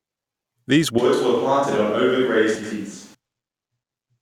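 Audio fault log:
0.99–3.14 s, switch to a distant microphone: the speech abruptly turns roomy and hollow with thinner bass, drops about 5 dB, and gains a room-noise floor roughly 35 dB below the speech, then snaps back; likely the close microphone dropped out and a farther pickup covered.
2.55–2.73 s and 3.83–3.99 s, frames out of order: each stretch plays as two adjacent blocks of about 80 ms in swapped order, producing a short garbled flutter; the material is rearranged rather than lost, so overall timing holds.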